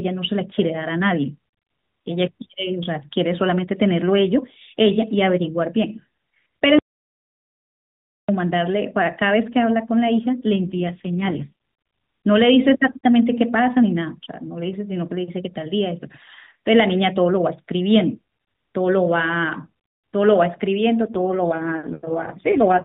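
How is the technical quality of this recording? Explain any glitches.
The recording has two kinds of glitch: one silent gap and two stretches where the speech turns coarse. The sound is narrowband mobile audio throughout, with nothing above 4 kHz.

From 6.79 to 8.29 s there is an audio dropout to silence. The speech stops mid-flow for about 1.5 s and the gap is silent, with no room tone. The input was likely lost for a moment, through a failed link or a brief mute, while the recorder kept writing silence. Whatever was said in that gap is gone.

From 10.56 to 11.51 s, and again from 21.14 s to the end, there is an AMR rate drop. The band stays the same and there is no gap. The voice turns buzzier, rougher and more synthetic, which fits the codec stepping down from 12.2 to 4.75 kbps. A weak radio link makes the network ask for this lower rate, so more bits go to error protection. Fewer pulses then describe each slice of speech. 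The first drop clears after about a second. The second lasts to the end of the clip.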